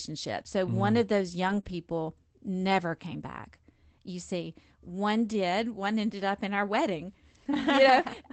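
Speech, carried over a call link that limits the top end to about 8 kHz. Lost packets rebuilt from error correction occur at 0.39 s, at 1.49–1.59 s just after "mm one of those", and at 1.65–1.71 s; low-bitrate backup copies in the following packets were decoded in their place, so those stretches sound rougher and noisier but have no gaps. Short concealed packet loss at 0.43–0.47 s and 1.61–1.65 s leaves a brief smear or wobble where the decoder extended the preceding sound over 11 ms and 20 ms respectively of the 20 ms of audio missing each time.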